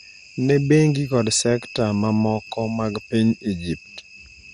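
Throughout the speech the sound is dull and gurgling, with a granular edge, nothing above 15.8 kHz, and upper bands flickering in and out. That is likely MP2 compression at a starved rate near 64 kbps, dropping whole sub-bands and coarsely quantising the rest.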